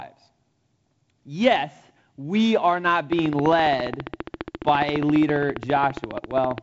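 From 3.13 s to 6.59 s, a train of clicks ticks through the speech. About fifty evenly spaced pulses arrive at 14.8 per second, peaking well above the voice. Nearby interference is the likely cause.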